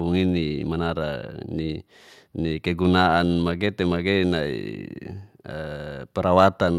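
Nothing in this recording stands out as a technical fault, so there's nothing to flag anywhere along the way.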